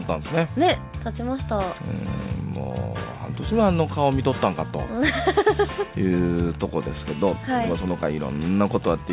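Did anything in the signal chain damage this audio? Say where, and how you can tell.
No, the signal chain didn't damage this audio: it has come over a WebRTC call path, and the band stops at 4 kHz, which fits a narrowband G.711 mu-law codec working as designed.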